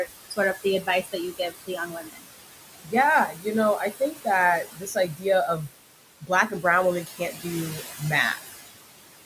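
Right from the start, the noise suppressor artifacts run through the whole clip. The suppressor is pulling the steady background down by about 17 dB frame by frame, so the room noise, which sits only about 11 dB under the speech, drops away in the gaps and comes back up under the talking.

On top of that, there are three stretches of speech cut by the noise suppressor: 0.06 to 2.25 s, 2.84 to 5.25 s, and 6.21 to 8.58 s. In each one the suppressor mistakes some of the speech for noise, adding up to around 0.7 s per stretch. Those bits get dragged down with the background by as much as about 16 dB in the first stretch, 13 dB in the second and 15 dB in the third, so soft consonants and word endings sound swallowed and faint.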